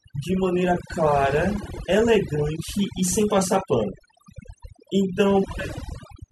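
A speech recording shows overdone noise removal from start to finish. A noise reduction stage set too aggressively is gating individual frequency bands whenever their level drops near its noise estimate. The pauses collapse into near silence scattered with twinkling, musical specks. Low-level parts of the voice fall below the threshold and are stripped out with the noise.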